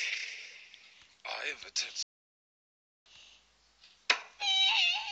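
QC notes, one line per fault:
2.03–3.06 s, playback stall: the sound stops mid-flow and the output goes completely silent for about 1.03 s before continuing, likely because the player ran out of data or its thread was blocked. A dropout of a few milliseconds would sound like a tick, but this silence lasts a full second.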